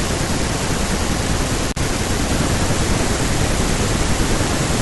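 A loose cable or plug briefly loses its connection at 1.69 s, an intermittent contact that opens the signal path for about 52 ms until 1.77 s. The speech drops out abruptly, with crackle at both edges of the gap and faint hiss in between.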